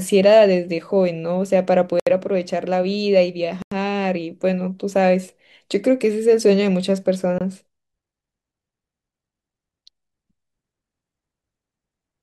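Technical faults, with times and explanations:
2.00–2.07 s, 3.62–3.72 s and 7.38–7.41 s, block of digital silence: the speech drops straight to zero and snaps back with no fade. The gaps run about 70 ms, 93 ms and 23 ms. The longer two come across as short holes and the last is nearly just a tick. The 93 ms and 23 ms gaps fit 4096- and 1024-sample buffers the program didn't fill in time.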